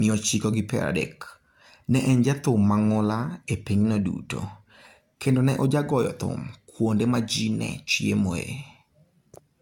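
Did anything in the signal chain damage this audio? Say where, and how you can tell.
Yes, generation loss throughout the speech at the codec stage: swirly, hollow smearing with blurred consonant onsets and nothing above 17 kHz. This likely comes from roughly seven lossy passes, fitting 96 kbit/s AAC-LC, each requantising on a shifted frame grid so noise and spectral holes accumulate.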